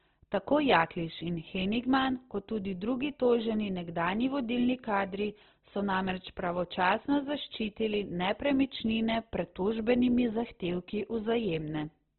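Throughout, the speech is grainy and rough, with nothing above 4.2 kHz. This is likely heavy Opus compression, which fits a rate near 12 kbps.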